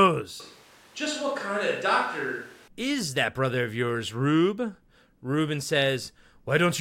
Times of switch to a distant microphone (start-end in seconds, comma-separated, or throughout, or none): 0.40-2.68